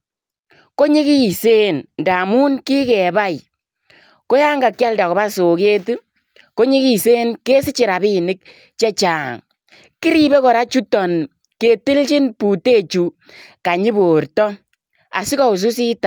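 No technical faults can be heard anywhere in the recording. Nothing interrupts or alters the speech at any point.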